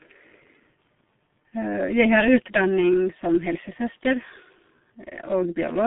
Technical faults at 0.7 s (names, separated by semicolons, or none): G.723.1 codec